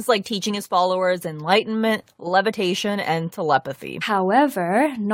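At 4.01 s the speech jumps abruptly ahead with a small blip, likely a stream segment skipped when one segment failed to load and playback continued.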